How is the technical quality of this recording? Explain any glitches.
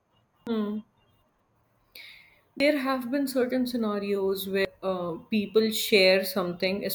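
The recording has three short glitches caused by damaged data in a compressed stream, at 0.47 s, 2.60 s and 4.65 s. The second falls just before "have been certain scenarios" and the third just after it. At each point, corrupted bytes in the compressed speech made the decoder misread a frame and lose sync until it found the next valid frame header. Each one is heard as a brief chirp, squawk, click or short hole that cuts into the speech.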